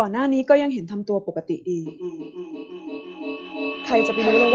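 Feedback echo between two devices runs from 1.86 s to the end at 4.54 s. Two devices in the same room share the call, and each picks up and resends what the other plays, so the sound keeps coming back about every third of a second. Its own device's echo canceller can't remove it. The repeats grow thinner and more ringing, and they peak at about 2 dB below the speech, so they pile up instead of fading. The audio is band-limited near 8 kHz, as expected from the call's codec.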